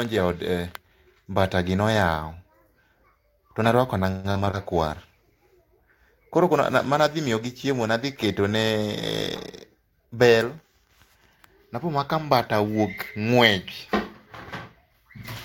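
Speech with three kinds of network fault. From 4.11 to 4.55 s, just after "tone arwako", there is repeated packet loss with a robotic sound. Several holes come close together, the longest about 127 ms. About 210 ms is patched by stretching the previous sound and about 80 ms is simply missing, so nearly half the stretch is filler. That robotic, stuttering texture sets it apart from a bitrate drop, which dulls the sound without breaking it up. From 4.88 to 11.23 s, ending before "napo mana ka mbata", a call bitrate drop makes the audio coarse and watery, with the top end muffled. The low point lasts about 3.4 s. The sound points to the encoder falling from something like 64 kbps to about 26 kbps after the bandwidth estimate sank, and it recovers at the end. This is continuous degradation with no gaps, unlike the packet-loss stretch. Two jitter buffer speed-ups follow, at 9.74 to 10.15 s and at 14.85 to 15.18 s. 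The delivery runs at about 113% speed with the pitch unchanged, as the receiver trims around 70 ms and 50 ms of pitch-period slices to drain excess buffered audio. The hurried pace without any chipmunk pitch shift marks this as a speed-up rather than a resampling error, and nothing drops out, unlike the packet loss.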